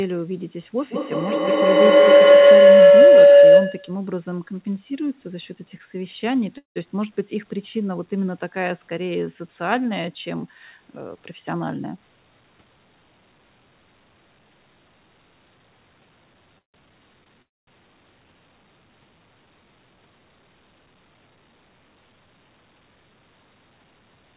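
From 0.78 to 4.06 s, two devices on the call form a microphone-to-loudspeaker loop that gains level on every pass, producing a feedback howl near 500 Hz that repeats roughly every 150 ms and peaks about 15 dB above the speech.

At 6.58 to 6.78 s, delayed packets likely emptied the jitter buffer, causing a call audio freeze: the last sound is held briefly and fades to about 140 ms of silence, then the speech resumes where it stopped, about 180 ms late.

From 11.01 to 12.32 s, a jitter buffer speed-up trims surplus buffered audio by cutting short pitch-period pieces, roughly 150 ms in all. The speech runs at 110% speed and sounds hurried, with unchanged pitch.

Two more freezes follow. At 16.58 to 16.76 s, about 140 ms of the 156 ms fill is silent. At 17.42 to 17.69 s, about 250 ms of the 253 ms fill is silent, with nothing lost either time.

Between them, from 17.24 to 17.28 s, a short stall from a late packet stretches the last sound for 20 ms, so a sound is held too long.

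Throughout, nothing is heard above 4 kHz, which fits a G.711 narrowband call path.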